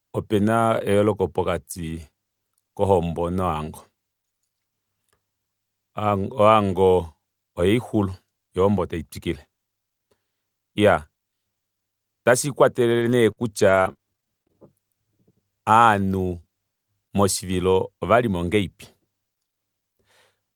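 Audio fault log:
12.99–14.59 s, repeated packet loss (robotic sound). The speech breaks up into about a dozen short holes in under two seconds. The longest is 55 ms. About 280 ms of sound goes missing, and 256 ms is filled by stretching the last fragment forward. Roughly 150 ms of that is only roughly rebuilt. Each patch repeats stale sound before the next hole arrives. The result is choppy, with pieces missing.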